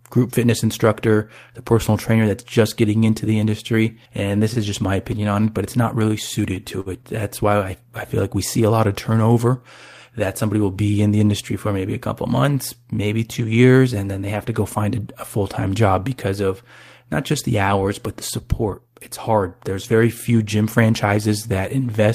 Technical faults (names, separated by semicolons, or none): short stall from a late packet